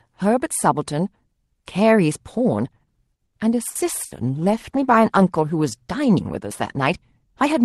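At 3.25 s a packet arrives late and the jitter buffer runs dry, producing a short stall from a late packet. The receiver stretches the last sound for about 80 ms until the packet turns up, then carries on from the same point. Nothing is lost, but that moment is held too long, with a faint buzzy smear.

From 3.68 s to the end, a call bitrate drop sets in. The bandwidth estimate falls and the Opus encoder has far fewer bits to spend. The coarser coding, consistent with a drop from about 32 to 18 kbps and holding at the low rate for roughly 3 s, makes the sound rougher and grainier than the cleaner Opus quality before it.

Within that stretch come two bursts of packet loss, at 3.69 to 3.78 s and 4.05 to 4.14 s. Each time, consecutive packets never arrive in time. The receiver extends the last sound and fades it over about 60 ms, so a held buzz or dying hiss replaces the audio, and about 60 ms of real content is skipped each time before playback resumes further on.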